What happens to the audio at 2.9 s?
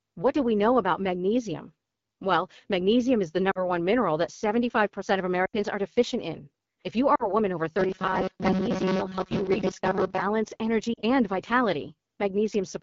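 At 2.9 s the speech carries the AMR wideband (HD Voice) codec, which runs through the whole clip. A pulse-driven vocal tract model codes the voice, with noise filling above 6.4 kHz. The sound is rough and raspy, which fits one of its lowest rates, around 8.85 kbit/s.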